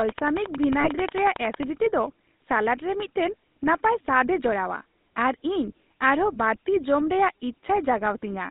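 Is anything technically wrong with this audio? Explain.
Yes. The speech has passed through the GSM full-rate codec, and its damage is plainly audible throughout. The line band runs from 200 Hz to 3.7 kHz, and the rate fits 13 kbps. The codec rebuilds the voice from a vocal-tract model driven by sparse pulses. This gives it a buzzy, gravelly roughness.

From 0.09 to 1.64 s there is a train of clicks. They come at a regular 11.1 per second, about 20 in all. Each peaks at about 15 dB above the signal. It sounds like steady ticking over the speech, and the likely cause is interference from nearby equipment.

From 0.80 to 0.90 s there are lost GSM frames, 40 ms of them. The decoder repeats the last good frame to cover the gap. The sound there is held as a brief, rough, metallic ring.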